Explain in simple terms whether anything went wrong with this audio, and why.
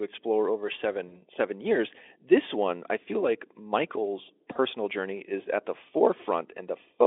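Two short dropouts, both VoIP packet loss concealed by the speech codec. Just after "explore over", at 1.08 to 1.21 s, and before "journey is at the", at 4.53 to 4.56 s, data went missing. The decoder filled each gap by stretching the previous sound into a fading buzz or noise, briefly smearing the speech.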